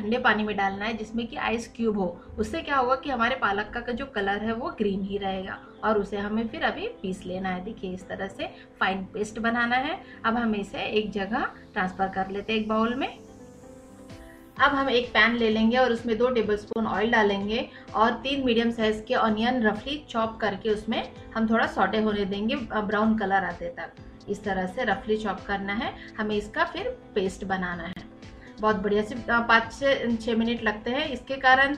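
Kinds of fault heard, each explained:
Gap at a join of encoded pieces: two short dropouts, about 32 ms at 16.73 s and about 35 ms at 27.93 s, where the sound briefly goes silent and then resumes exactly where it left off. The pieces were encoded separately and butted together without trimming, so each join keeps one run's padded final frame and the next run's start-up delay. Both gaps have their edges smeared by the codec.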